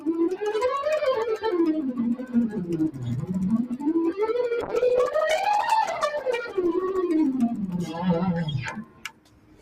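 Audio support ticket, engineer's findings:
Noise suppressor applied to music or sounds, whole clip. Speech-tuned suppressor left active on non-speech material. Level swings of roughly 15 dB as steady content and decays get classed as noise and pulled down while attacks pass. Audible pumping and thinning throughout.

Sound cut by the noise suppressor, 2.16–2.64 s, 3.64–3.85 s, 8.71 s to end. Same suppressor gating held and fading content. Dips of about 13 dB in the first two (roughly 0.3 s and 0.2 s affected), deepest about 17 dB in the last. Tails cut short, sustained sound sinks.

Call bitrate drop, 4.63–7.07 s. Bandwidth estimate collapse forcing Opus into very low-rate coding. Muffled, rough, watery texture with lost top end, worst for about 2.4 s. Sound points to a fall from around 64 kbps to roughly 11 kbps before recovery.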